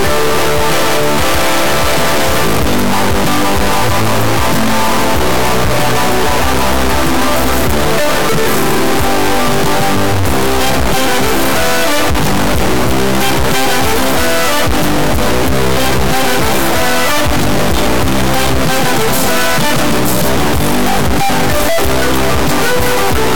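Integer read as float runs from start to end: the sample bits were interpreted with the wrong format, which fits 32-bit integer data decoded as 32-bit float. Values land near zero or far past full scale, so the audio becomes a harsh, extremely loud square-wave buzz that falls silent in the quietest passages.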